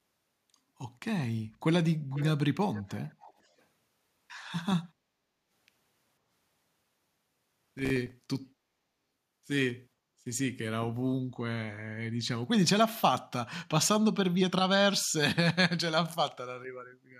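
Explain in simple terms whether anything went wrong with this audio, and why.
A faint, delayed repeat of the speech, trailing about half a second behind, appears from 2.1 to 2.27 s and again, quieter, from 2.74 to 3.63 s. This is likely echo leak: a loudspeaker's sound got past the echo canceller and was sent back.

From 7.57 to 8.12 s a gritty crackle rides over the sound. That is processor overload crackle: the processor fell behind, leaving about fifteen tiny silent gaps of a few milliseconds each.

From 16.9 to 17.12 s the room sound briefly dips. This is background gated by the echo canceller, which turned the microphone down for a moment.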